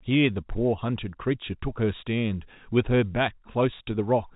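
Nothing to flag in this speech beyond its G.711 telephone coding, which cuts the band off at about 3.8 kHz and adds at most a faint, level-following quantisation hiss.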